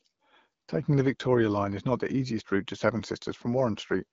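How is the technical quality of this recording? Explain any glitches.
No audible glitches or faults.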